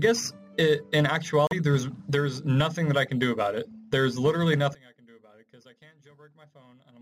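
At 1.47 s the wireless link likely hit a Bluetooth stall: interference delayed packets, the headphone buffer emptied, and playback paused until retransmissions arrived. The result is a brief dropout of about 40 ms of silence, ending by 1.53 s, after which the audio resumes.

From 4.75 s to the end, one channel inverted is the likely cause of the change: with one side's polarity reversed, the content shared by both channels cancels when they are summed to mono. The sound falls by about 29 dB, leaving only a faint remainder of what differs between the channels.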